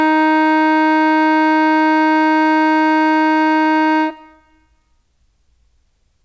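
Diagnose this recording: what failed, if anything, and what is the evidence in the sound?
Network stage, scattered short gaps: between 1.16 and 2.30 s the music picks up about seven brief ticks and smears, none longer than roughly 15 ms. Packets arrived late or not at all, and the receiver filled each hole by extending the preceding sound, about 70 ms of concealment in total.

Buffer stage, jitter buffer slow-down: from 3.06 to 3.72 s the music drags to 95% speed with unchanged pitch, stretching that stretch by 35 ms. The jitter buffer was rebuilding its reserve by repeating single pitch periods, audible as drawn-out tones through the G.722 path's 8 kHz band limit.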